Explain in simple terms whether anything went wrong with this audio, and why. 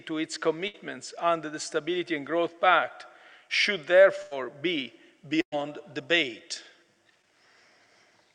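Burst of packet loss at 0.67 s, 4.22 s and 5.41 s: chunks of the stream arrived too late. The player stretched and faded the last sound, then skipped ahead, dropping 60 to 120 ms each time, with the third gap going silent for about 70 ms.

Short concealed packet loss at 7.22 s: about 20 ms went missing, and the player briefly imitated the preceding sound before blending back, causing a quick smear.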